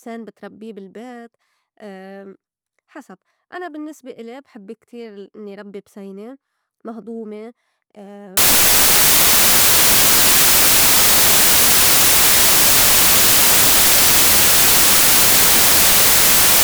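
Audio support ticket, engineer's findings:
Samples built from the wrong bytes, 8.37 s through to the end. Speech drops out under loud, hissy white noise. Probable component: the decoder or file reader. Mechanism: bytes get assembled off by one, swapped or misaligned, so the jittery low bits land on top as the big part of each value.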